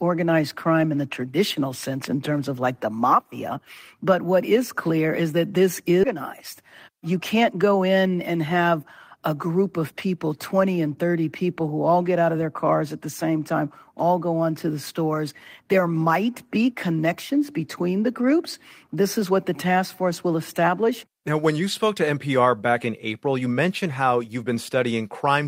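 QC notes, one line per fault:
6.03–6.16 s: skip ahead. Playback leaps forward with no silence, so about 0.4 s of the sound never plays and the two sides are butted together. Audio that was already queued was discarded to shed latency, which cuts the delay by roughly the same amount. On a spectrogram the spectral patterns break abruptly at one vertical line with no gap. The waveform shows the envelope changing sharply at the join instead of decaying.
6.62–7.64 s: jitter buffer speed-up. For about a second the sound runs at 105% of normal speed while the pitch stays the same, so it feels slightly rushed. The receiver had more audio buffered than it wanted and removed short pitch-period pieces again and again, about 70 ms in total. A spectrogram shows the harmonics holding their frequencies while events sit a little closer together. The waveform shows periods dropped at repeated, nearly seamless splice points.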